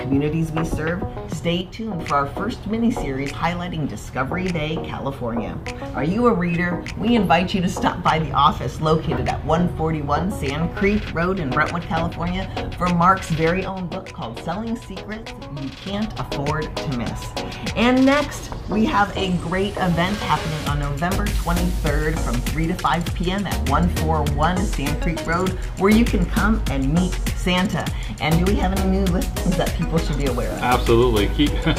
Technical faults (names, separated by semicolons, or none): one channel drops out